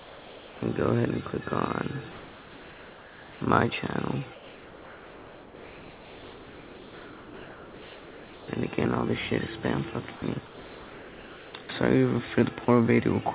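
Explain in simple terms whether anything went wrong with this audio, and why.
Comfort noise in place of the background appears from 0.0 to 0.62 s, 2.12 to 3.41 s, 4.34 to 8.48 s and 10.46 to 11.54 s. In these pauses the real background is replaced by a smooth, slightly quieter hiss, most likely because the sender stopped transmitting and the receiver filled the gap with synthetic noise.

Sound dropped by the voice detector happens briefly at 10.16 to 10.22 s, 11.63 to 11.69 s and 12.65 to 12.68 s. Tiny bits of sound vanish into that same steady hiss, likely because the sender's detector mistook them for background and stopped sending.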